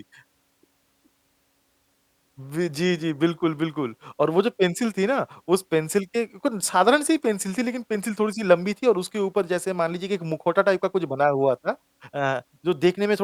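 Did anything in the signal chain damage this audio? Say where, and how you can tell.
No, nothing in the chain audibly damaged this speech recording: the signal holds steady at every stage, with no sign of trouble from wiring, conversion, processing, transmission or playback.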